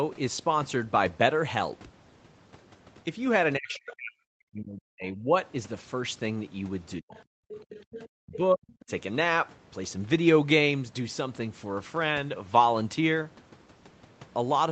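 From 3.58 to 5.34 s both ends talk at once, and the echo canceller, likely unable to separate the talker from the loudspeaker echo, produces speech suppressed in double talk. The voice drops by around 40 dB in pieces, about a second and a half in all. At 3.74 and 5.06 s, the other side's voice leaks through past a likely incomplete echo cancellation in brief faint scraps about 30 dB under the speech.

At 7.0 s the talker's voice is cut again for a moment, then from 7.1 to 8.09 s the leaked far-end voice is stronger, only about 15 dB below the speech. Inside that, at 7.41 to 7.49 s, the background is gated by the echo canceller: the room sound falls by about 39 dB for roughly 70 ms, then returns.

From 8.1 to 8.9 s the speech is suppressed again by about 40 dB, in patches totalling about 0.4 s, with another faint scrap of the other side at 8.8 s. Throughout, nothing is heard above 8 kHz, which fits an Opus call path at that bandwidth.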